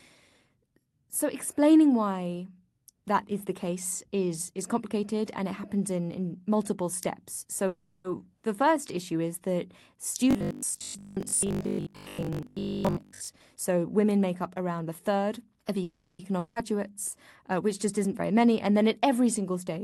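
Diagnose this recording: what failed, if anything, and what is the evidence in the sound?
Call audio freeze, network and jitter buffer stage: at 7.67–8.06 s after "in in multiple steps" and 15.83–16.21 s, a fading buzz fills about 0.37 s, likely from held packets. Nothing is lost, unlike a dropout.

Robotic sound from repeated short buffers, buffer stage: from 10.31 to 13.41 s a rigid metallic 50 Hz buzz rides the sound, which fits 20 ms blocks being replayed in place of fresh audio. The pitch is fixed, unlike a freeze's fading tail.

Jitter buffer speed-up: from 13.56 to 14.37 s, before "up around a third", the sound runs about 8% faster at unchanged pitch as the receiver trims short pieces to reduce delay.

Long network dropout: at 16.39–16.58 s, after "around a third of", a brief fill of 0.17 s gives way to resumed sound with about 0.48 s missing, likely after packets never arrived. 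Unlike a freeze, audio is lost.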